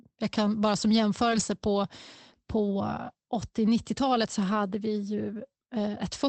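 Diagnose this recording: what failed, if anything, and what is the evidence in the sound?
Network stage: lost packets rebuilt from error correction. From 1.31 to 1.41 s, just after "jag kan bara som", the sound turns briefly rough and noisier without dropping out, and again from 3.65 to 3.67 s. The 100 ms stretch points to three separate lost packets, the later one to a single packet. The Opus decoder at 24 kbps, band-limited to 8 kHz, played the low-bitrate copy from the next packet in place of each lost one. On a spectrogram, these frames show smeared harmonics and a raised noise floor. The waveform stays continuous.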